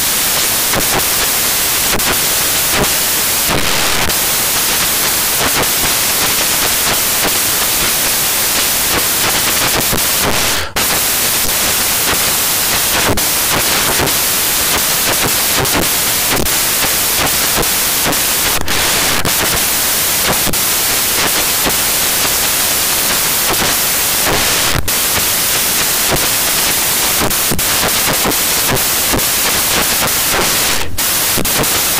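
Throughout the speech, the samples are built from the wrong bytes, turning fast-changing low bits into loud white noise; the spectrogram shows flat full-band hiss, the waveform a clipped-looking block.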